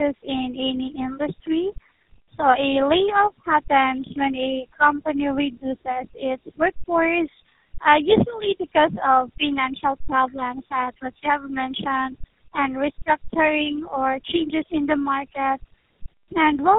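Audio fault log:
Throughout, tandem speech coding: rough, warbly and muffled, with nothing above 3.8 kHz. It fits three speech codecs in a row, each re-encoding the previous one's damage.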